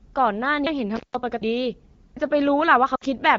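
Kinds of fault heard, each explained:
Audio missing between chunks: The speech jumps abruptly at 0.67 s and again at 2.17 s. The two sides butt together with no gap of silence, so roughly a third of a second of speech seems to vanish each time. The likely cause is a recorder or processor handling the audio in blocks of about one second, which drops a short piece while closing one block and opening the next.
Intermittent contact: From 0.96 s to 1.15 s the signal breaks off as if a plug or cable briefly lost its connection. The line stays open for about 158 ms. Crackle marks the edges of the break where the contact makes and breaks. While it is open, the speech is replaced by a faint residual hiss.
Lost AMR speech frames: From 2.95 s to 3.03 s the speech drops out for about 60 ms, which fits three consecutive 20 ms frames going missing. The wideband decoder fills the gap by repeating its last good pitch and vocal tract settings at falling level. 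The sound drops to near silence within two frames. It then returns weak or rough for a moment before the HD Voice coding settles back.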